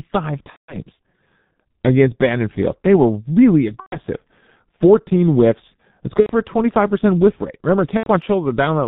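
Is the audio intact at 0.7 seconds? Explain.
No. From 0.50 to 0.79 s there is VoIP packet loss concealed by the speech codec: the decoder extrapolates its last pitch and filter with falling gain, so the sound becomes a buzzy tone or a coloured noise that fades. On a spectrogram this shows as smeared, repeating harmonics, and the waveform as a shrinking envelope. The gap fits roughly six 30 ms frames, or 180 ms. The G.723.1 codec at 6.3 kbit/s, present throughout, also muffles and roughens the sound, leaving an empty spectrogram above 4 kHz.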